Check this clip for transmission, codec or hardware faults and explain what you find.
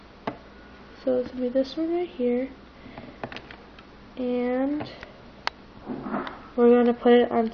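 Nothing in the clip points to a transmission, codec or hardware fault. The audio holds together with no breaks, glitches or disturbances to report.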